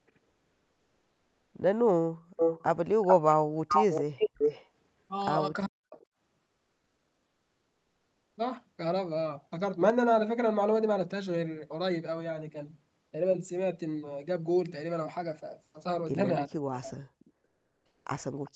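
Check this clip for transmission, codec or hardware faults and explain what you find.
There's a handful of call-path problems in this speech, four kinds in all, on top of the normal 8 kHz ceiling you'd expect from the call's codec.

Comfort noise in place of the background, at 0.29–1.53 s, 6.43–8.37 s and 17.45–18.05 s. In the pauses the real room sound gives way to a smooth, featureless hiss, about 2 dB quieter in the first two and about 5 dB in the last. The sender most likely went silent under Opus DTX and the receiver filled in synthetic noise.

Echo leak at 2.36–2.63 s and 3.68–4.68 s, where a copy of the voice trails 0.39 s behind at roughly the same level. There are faint scraps of it at 6.00–6.06 s and 18.45–18.51 s. The far end is likely on a loudspeaker, and its echo canceller let some of that playback back into the mic.

Speech suppressed in double talk, at 5.51–5.97 s and 16.47–17.30 s. 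The voice drops out in pieces, very deeply, for about 0.3 s and 0.7 s in total. With both sides talking at once, the canceller likely couldn't tell the talker from the echo and ducked everything.

Sudden gain jump at 9.81–9.90 s. Voice and background step up together by about 6 dB, with no fade in between. That points to a digital gain change applied instantly, likely a setting or bit shift switched without a ramp.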